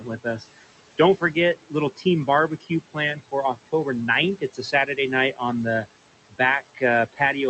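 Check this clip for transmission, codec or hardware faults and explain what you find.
The faults here come from noise suppression rather than from the network or hardware: a noise suppressor is working on the whole recording and in places is cutting into the speech itself. The room noise sits about 16 dB below the speech. The call path limits the audio at 8 kHz, consistent with Opus at a modest bitrate of around 32 kbps.

Noise suppressor artifacts run throughout. The suppressor estimates the steady background in each frequency band and pulls those bands down frame by frame, here by about 16 dB. Between phrases the noise sinks, then rises back under the speech. On a spectrogram the noise floor looks blotchy and patchy, with isolated specks in the gaps. The waveform shows near-silent pauses that swell whenever speech returns.

Speech cut by the noise suppressor occurs in four spans: 0.0 to 0.45 s, dipping about 10 dB; 0.98 to 3.73 s, the deepest at about 18 dB; 4.39 to 5.41 s, about 14 dB; and 6.3 s to the end, about 17 dB. 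In each span the suppressor mistook quiet speech energy for noise and attenuated it along with the background. Soft consonants and word endings sound swallowed. Together the first three spans account for well under a second of affected sound. On a spectrogram, faint fricative and tail energy is missing in short notches. In the waveform, syllable edges drop abruptly instead of decaying.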